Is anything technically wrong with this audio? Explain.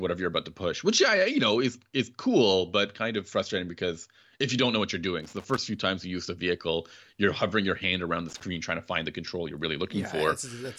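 Yes. The speech is hit twice by loose connector crackle. The first burst runs from 5.20 to 5.58 s, just after "don't know what you're" and before "few times you use". A shorter one follows from 8.29 to 8.44 s, between "your hand around the" and "trying to find the". A worn or dirty contact is making and breaking as it shifts, so the signal is chopped on and off and any DC on the line adds pops. Both bursts are heard as irregular scratching crackle. On a waveform they show as jagged dropouts and spikes, and on a spectrogram as scattered broadband vertical streaks.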